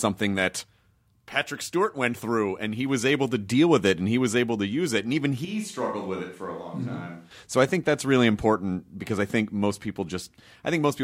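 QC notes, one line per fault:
5.45–7.31 s, switch to a distant microphone: speech turns abruptly roomy and hollow, thinner in bass and roughly 10 dB quieter with more room noise, likely the close microphone dropping out.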